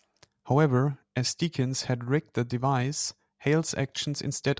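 No technical faults can be heard at any point in this speech recording.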